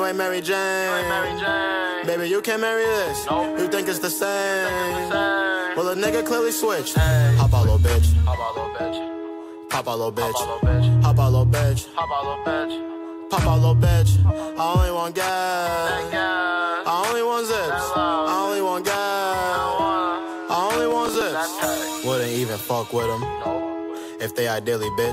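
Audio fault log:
20.91–21.22 s, processor overload crackle: a handful of roughly 10 ms buffers miss their deadlines, replaying stale audio with hard edges, heard as brief gritty tearing over the sound.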